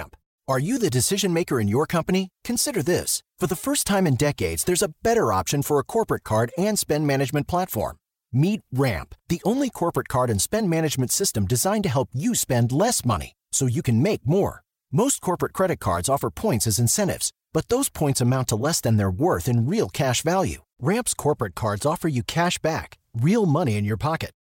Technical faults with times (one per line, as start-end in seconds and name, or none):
none